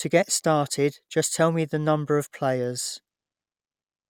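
Speech recording, no technical faults detected across its duration.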